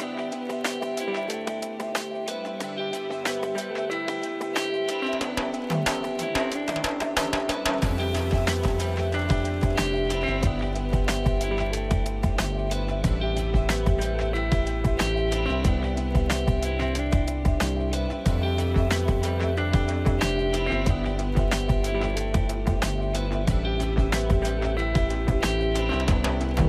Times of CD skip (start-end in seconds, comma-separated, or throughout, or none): none